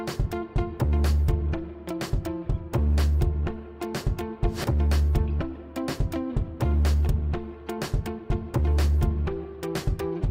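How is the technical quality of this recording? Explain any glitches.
No glitches are audible anywhere in this recording, and the signal holds steady and intact throughout.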